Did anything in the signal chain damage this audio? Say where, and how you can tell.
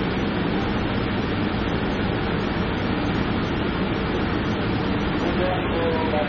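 Yes. Throughout the clip the sound is dull and smeared, with a fizzy, warbling texture on sustained parts and nothing above 18.6 kHz. That points to the codec stage, likely AAC compression at a low bitrate around 27 kbps, starving the spectrum of bits.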